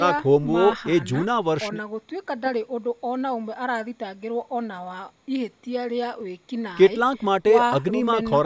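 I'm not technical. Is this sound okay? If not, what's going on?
Yes, nothing stood out on listening; the speech has the slightly thin, trimmed-bass sound typical of a call microphone, which is normal.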